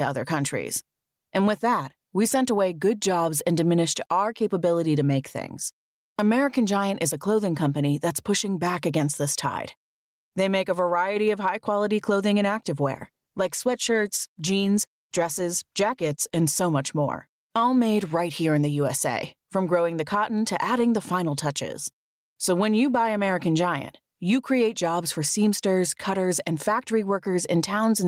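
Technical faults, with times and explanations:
Throughout, gain pumping. The gain swings by around 10 dB. Loud and quiet parts sit close in level and sound squashed. Likely cause: input gain far too high, reined in by a fast limiter.
12.94 to 16.67 s, call bitrate drop. Right after "high quality clothing and" the speech turns rough and duller for about 3.7 s, recovering by "much more all made". This coarser coding fits the encoder dropping from 32 to 18 kbps after a fall in the bandwidth estimate.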